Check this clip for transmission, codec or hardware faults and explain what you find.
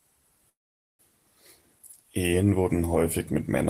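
One transmission fault is present: a call audio freeze from 0.49 to 1.01 s. The sound stalls and a brief concealment tail fades into about 440 ms of silence. Speech then resumes intact, about 0.5 s late. A jitter buffer that ran empty while packets were delayed is the likely cause.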